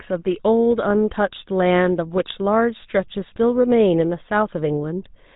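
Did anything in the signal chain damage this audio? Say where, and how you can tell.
Yes, at the codec stage, and it runs the whole clip. It's the GSM full-rate codec: the speech has that buzzy, gravelly roughness throughout, and there's nothing above 3.8 kHz. The damage is plainly audible, which fits the 13 kbps full-rate coder. It models the vocal tract and drives it with regularly spaced pulses, keeping only every third excitation sample, so the fine texture is replaced by that coarse buzz.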